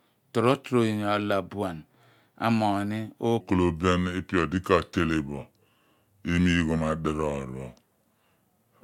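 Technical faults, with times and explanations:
3.41 s to 8.84 s, section at the wrong speed: from 3.41 s right through to the end, the speech drops into playback at about 0.8 times its proper rate, so everything drags and sinks by roughly four semitones at once. Because speed and pitch move together here, the talker suddenly sounds heavier and slower rather than just lower. The likely cause is that stretch being played or conformed against the wrong clock.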